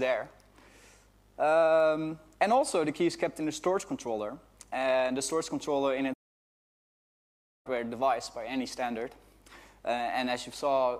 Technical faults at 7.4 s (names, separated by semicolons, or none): playback stall